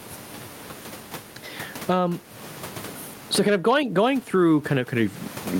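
Gain pumping runs through the whole speech clip. The level seems to swing by roughly 20 dB between gaps and loud syllables. The likely cause is input gain set far too high, with a fast limiter or compressor clamping down on each loud sound. Loud and soft parts sit close together, and the speech sounds squashed. The room noise, about 36 dB below the speech, is part of the recording.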